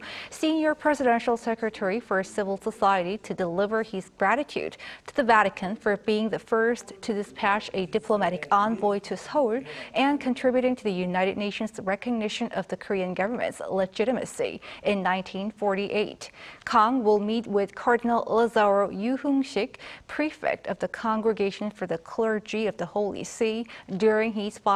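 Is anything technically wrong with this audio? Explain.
No, nothing technically wrong can be heard in this audio.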